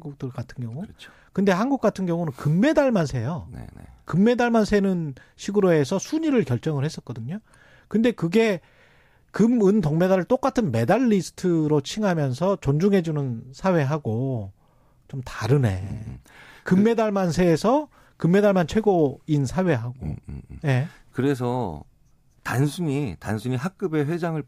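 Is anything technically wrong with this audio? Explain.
No, nothing here stands out as a technical problem; this speech recording comes across just fine from a technical point of view.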